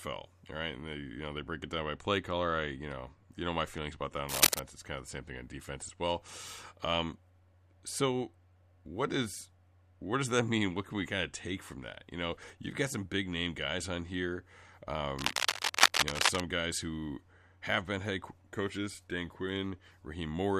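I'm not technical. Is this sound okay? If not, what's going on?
No. Cable scratch noise appears twice: from 4.29 to 4.60 s, just after "feelings about that on", louder than the speech, and from 15.17 to 16.42 s, just before "guys who have been", a little softer. Unlike steady hiss or single clicks, these are brief rough, crackling bursts, likely from a worn cable or connector being moved.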